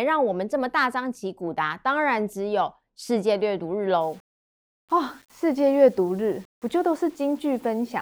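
From 4.01 s, likely rounding to 8 bits without dither causes low bit depth without dither: grainy distortion about 35 dB down that tracks the speech.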